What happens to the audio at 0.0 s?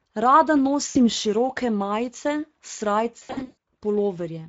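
From 0.0 s the speech carries plainly audible Speex codec damage throughout. Few bits code the excitation, so it sounds hoarse and noisy, consistent with roughly 17 kbps.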